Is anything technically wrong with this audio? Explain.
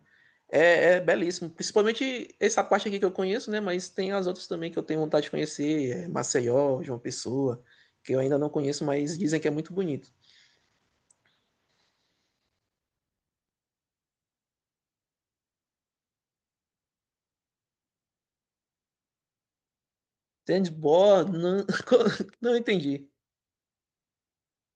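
No, nothing technically wrong can be heard in this speech recording. There are no faults to point to, so there are no times or mechanisms to explain.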